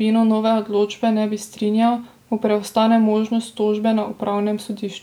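Nothing in the recording stands out as a technical fault; the speech runs along from the first moment to the last without any dropouts, glitches or other disturbances.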